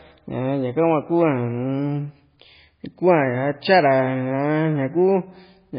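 Throughout, the speech sounds watery and swirly, with nothing above 5 kHz. This is likely heavy MP3 compression, which fits a bitrate around 16 kbps.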